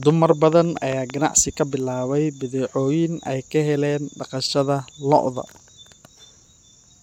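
From 0.03 to 1.11 s, a train of clicks ticks over the speech: around seven sharp pops, unevenly spaced at about 4.7 per second and about 10 dB above the signal, likely from electrical interference. They appear as narrow waveform spikes and thin vertical spectrogram lines.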